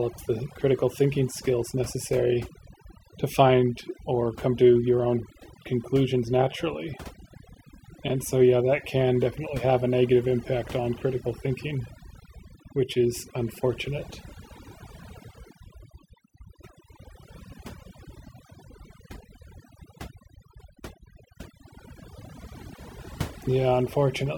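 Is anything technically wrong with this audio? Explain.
Yes. Throughout the speech, the background drops to near silence dotted with twinkling specks. This is overdone noise removal: a noise reducer set too hard cuts individual frequency bands close to its noise estimate, taking quieter parts of the voice along with the noise.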